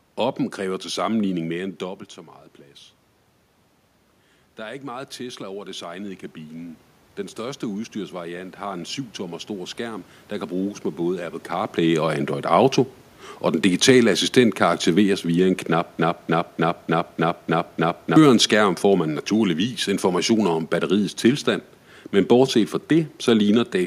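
Speech recording with two technical faults. From 4.56 s to 11.43 s there is automatic gain rising: after the input level fell by about 12 dB, the gain control compensated by raising its gain by about 10 dB gradually over roughly seven seconds, so the voice and the room noise swell together rather than the voice alone. This ramp is separate from the level shifts near 1.5 s and 11.5 s, where the talker moved relative to the microphone. From 15.99 s to 18.16 s, just after "aktiveres via en knap", a broken-record loop occurs: a 0.30 s fragment repeats seven times back to back before the audio resumes at "skærm får man naturligvis". The likely cause is a stall in the player, encoder or stream, which kept re-sending the last fragment it held. The audio that should have filled those two seconds is lost.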